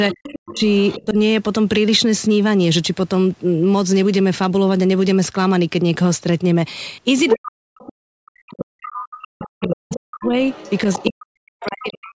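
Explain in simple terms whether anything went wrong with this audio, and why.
From 0.09 to 1.06 s, 7.28 to 7.91 s and 8.83 to 11.89 s a second voice comes through. It is likely the other side's voice leaking through from the loudspeaker.

From 0.12 to 1.17 s and from 7.36 s onward, the talker repeatedly drops almost to silence, likely speech suppressed in double talk by the echo canceller.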